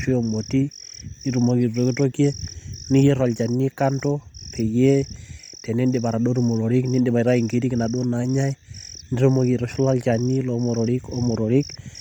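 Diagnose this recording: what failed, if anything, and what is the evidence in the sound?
The codec stage is where this one falls down. Across the whole speech clip there's a breathy, grainy sheen on the upper spectrum, the kind you get when high-frequency detail is zeroed and replaced with shaped noise. That points to Bluetooth LC3 compression, likely running hard at something like 32 kbps with 10 ms frames. The bandwidth still reaches about 20.2 kHz, so the damage isn't a lowpass. The codec is starving the top end of bits and filling it with noise.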